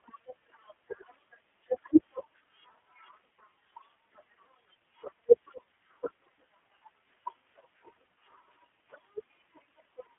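From start to finish the speech carries iLBC codec damage: a narrowband line from roughly 250 Hz to 3.4 kHz, nothing above 3.8 kHz, and a gritty, synthetic edge. Each short frame's excitation is rebuilt independently, which fits 20 ms frames at around 15 kbps.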